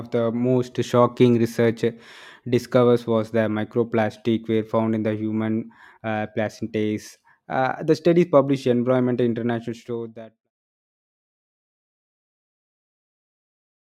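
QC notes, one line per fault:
No faults; sound fades out gently by 10.5 s.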